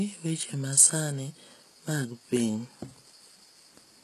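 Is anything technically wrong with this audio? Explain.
Yes. Throughout the speech, the treble is gritty and lispy, with nothing above 12.4 kHz. This is likely HE-AAC compression. The upper band is rebuilt from copied lower bands, so its harmonics don't match. The damage is plainly audible, consistent with a bitrate near 16 kbps.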